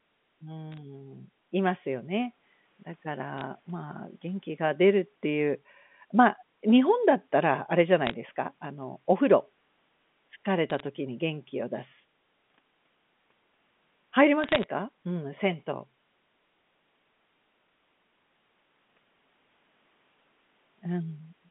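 Bit errors on a digital phone line cause bursts of crackle at 0.72–0.78, 3.38–3.41, 8.07–8.14, 10.70–10.80 and 14.44–14.64 s, the last being the longest. Flipped bits in the 8-bit A-law samples, a few tenths of a percent of them, knock individual samples to wrong values. Where a sign or high-order bit is hit, the sample jumps sharply, giving sharp ticks that pepper the speech while the line's 150 Hz to 3.5 kHz band carries on unchanged.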